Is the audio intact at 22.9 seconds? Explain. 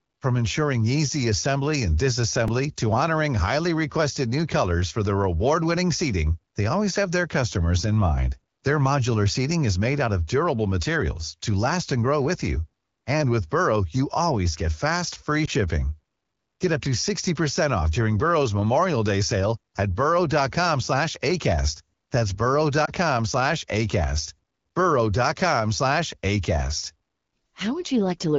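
No, there's a lost AMR speech frame from about 22.85 to 22.90 s. A single 20 ms frame failed its checksum, so the wideband decoder filled the gap by repeating the last good pitch and vocal tract settings at reduced gain, giving a quick dip or warble.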